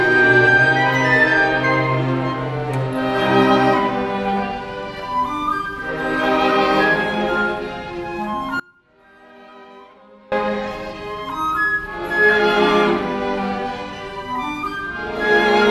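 At 8.60 s the sound just drops away and doesn't return properly until 10.32 s, a gap of about 1.72 s. It's an audio dropout to a faint residue: what's left in the hole is only a faint sound, somewhere around 25 dB below the normal signal level. The cut is abrupt at both ends, not a pause or fade, so the wanted feed was likely lost upstream while the path after the break stayed live.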